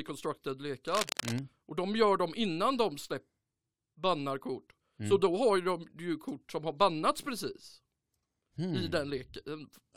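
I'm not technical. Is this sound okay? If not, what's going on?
No. A worn cable or connector was likely jiggled, causing cable scratch noise: a harsh scratchy rustle over the speech from 0.87 to 1.39 seconds.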